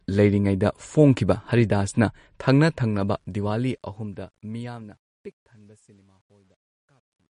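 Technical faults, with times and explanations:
Throughout: MP3 compression, likely at a low rate around 40 kbps. With so few bits the encoder discards everything above about 10.6 kHz and drops weak frequency lines that come and go from frame to frame, so the speech sounds dull and watery, with a swirling, metallic edge on s sounds and softened consonant attacks. The damage is plainly audible across the whole clip.
2.93 to 7.32 s: truncation distortion on a fade. The fade-out, which starts at roughly 3 s and runs to 7.32 s, is processed at a word length that fits about 11 bits, with no dither. As the level sinks toward the smallest step, the waveform collapses into coarse square steps. From 4.89 s to the end it turns gritty.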